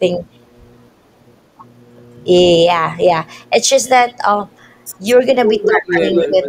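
A far-end echo canceller likely let part of its loudspeaker pickup through, so an echo leak returns a copy of the speech 206 ms late: a faint scrap from 5.08 to 5.16 s, well below the speech, then a louder burst from 5.62 to 5.67 s. At 5.66 to 5.82 s, with both sides talking, the canceller likely cannot tell the talker from the echo, and the speech is suppressed in double talk, dipping by about 10 dB. The echo returns strongly from 5.9 to 6.48 s, only slightly quieter than the speech. Within it, from 5.98 to 6.37 s, the speech sinks again by about 5 dB.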